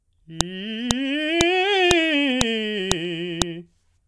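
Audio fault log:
0.41, 0.91, 1.41, 1.91, 2.41, 2.92, 3.42 s, file header played as audio: each 0.5 s piece's leading header bytes play as a sharp snap, showing as a thin waveform spike and full-height spectrogram stripe.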